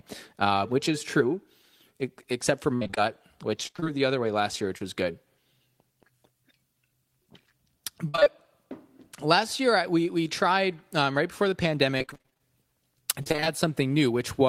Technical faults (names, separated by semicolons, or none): repeated packet loss (robotic sound); short concealed packet loss